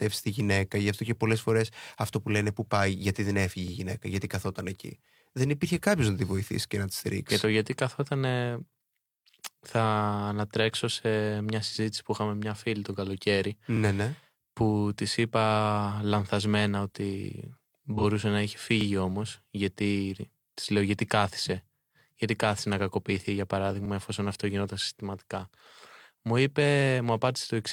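A small stutter recurs in this speech clip, a brief doubled fragment heard at 3.68, 8.72, 13.77, 18.81 and 23.86 seconds. The steady spacing of 5.0 seconds marks it as overlapping chunks. The audio was handled in 5-second blocks, and each new block began about 44 ms before the previous one finished, so that sliver plays twice at every join. Separately, a short smeared, phasey patch sits between 17.97 and 18.04 seconds. This is AAC frame loss with concealment. About 43 ms of data went missing, which fits a single lost frame, and the decoder covered the gap by rebuilding sound from the last good spectrum. The gap was too brief for the fill to fade toward silence, so it comes through as a blurred, noisy instant.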